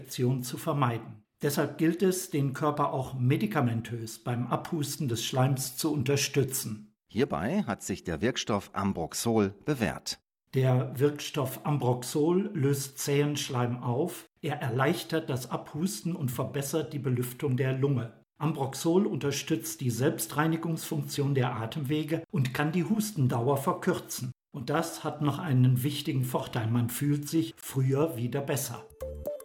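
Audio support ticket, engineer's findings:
No faults found on listening; no dropouts, clicks, distortion or level problems to report. No audio path is noted for checking beyond the recording itself.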